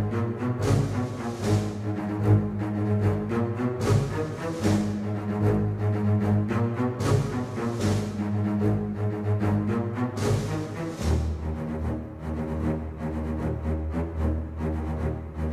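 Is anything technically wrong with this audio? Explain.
No, nothing technically wrong can be heard in this audio, and the signal holds steady throughout with no audible faults.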